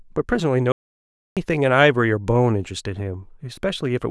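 The input signal was likely lost between 0.72 and 1.37 s, and the recorder kept writing silence in its place. This audio dropout to silence cuts the speech off abruptly, leaving 0.65 s of dead silence with no room tone before speech resumes mid-flow.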